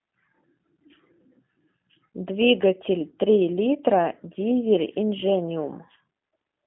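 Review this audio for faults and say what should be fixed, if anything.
The G.729 codec affects the whole clip. The speech is confined to a telephone band of roughly 200 Hz to 3.5 kHz, with nothing above 3.8 kHz, and carries a plainly audible rough, synthetic edge. That sound fits an 8 kbit/s G.729A-style coder rebuilding each 10 ms frame from a vocal tract filter, pitch predictor and sparse pulses. A plain band-limited channel would sound muffled but clean. The buzzy, slightly artificial texture shows parametric coding. To prevent it, carry the call over a wideband or higher-bitrate codec rather than G.729.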